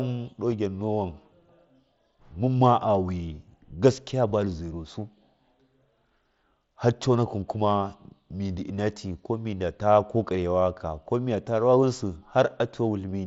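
At 0.51 s there is a brief concealed Bluetooth headset packet loss. A single stretch of about 7.5 ms, consistent with one dropped frame, failed to arrive from the headset, so the receiver filled the gap by repeating the closest-matching piece of the preceding waveform. Because the patch is so short, it is close to inaudible. On a waveform it shows as a tiny repeated cycle. A spectrogram may show a slight discontinuity in the harmonics within the 8 kHz band of the mSBC link.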